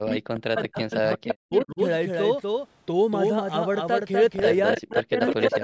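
Throughout the speech, a second full-band copy trails about 300 ms behind at roughly 5 dB lower, with no room colour: likely a doubled audio track from a second, slower capture path. From 0.0 to 1.8 s, the voice dips and cuts out in pieces, dropping as much as about 40 dB over roughly 1.5 s in total. This is likely speech suppressed in double talk, where the echo canceller muted its own talker while the far side spoke. At 1.28 to 1.34 s a brief scrap of voice returns 305 ms late, only about 5 dB under the speech. This is likely echo leak, where loudspeaker pickup got past the canceller and was sent back. A fainter scrap, about 20 dB down, follows at 4.76 to 4.8 s. From 4.78 s to the end, the voice again breaks up and drops deeply for about 0.7 s in total under double-talk suppression. Within that stretch, a stronger 305 ms echo leak runs from 5.27 to 5.49 s at about 5 dB below the speech. 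The band stops at 8 kHz and the lowest bass is trimmed, both from normal call microphone processing.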